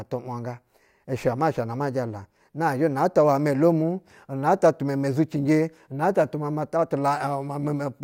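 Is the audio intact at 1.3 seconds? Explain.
No. Sample clock jitter runs from 0.0 to 2.04 s: timing errors of a few microseconds add a hiss, around 40 dB below the speech, that grows on louder, brighter passages.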